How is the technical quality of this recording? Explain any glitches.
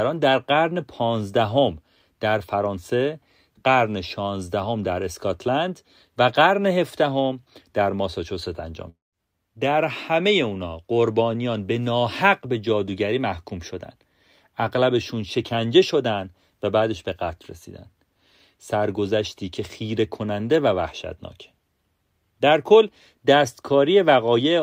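There's one real glitch, at about 8.89 s to 9.15 s in the speech. For roughly a quarter of a second the sound smears into a buzzy continuation of the last bit of audio, which fades out into about 170 ms of near silence before the speech picks up again with a chunk missing, around 240 ms gone. That pattern points to a long network dropout as the likely cause, with the receiver stretching out what it last had while nothing was arriving.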